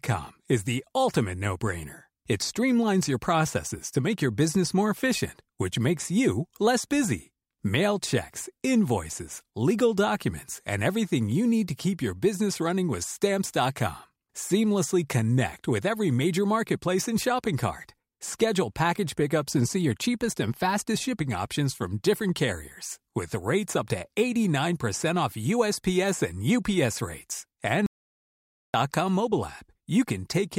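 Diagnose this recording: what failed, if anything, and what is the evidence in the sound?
Near the end, from 27.86 to 28.74 s, the speech cuts out to an audio dropout to silence: nearly 0.9 s of dead silence, no room tone at all. That points upstream of the recorder, likely a dropped input link or stray mute while capture kept writing silence.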